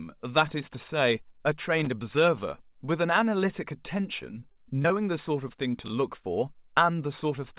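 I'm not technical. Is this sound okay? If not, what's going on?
No. There are three separate faults, all short, in a recording that has come through a phone-style call line, which is why nothing above 4 kHz is present and it sounds narrow.

At 1.79 to 1.87 s there is a loose connector crackle. A worn or dirty contact somewhere in the cable or plug lost and regained connection several times within less than a tenth of a second. Each break chops the audio, so you hear a brief scratchy burst rather than a clean sound.

From 4.40 to 4.92 s there is repeated packet loss, which gives a robotic sound. The call sends audio in small pieces over the network, and four of them went missing in this half-second stretch, about 100 ms in all, with the longest hole around 30 ms. The system patched most of the missing audio by stretching the sound just before it, and the quick succession of patches makes the audio choppy.

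At 5.86 to 5.90 s there are chunks out of order. One 20 ms piece of audio arrived one step late and was played after the piece that should have followed it. Nothing is lost, but the swap creates three abrupt joins in a very short space, heard as a tiny jumbled blip.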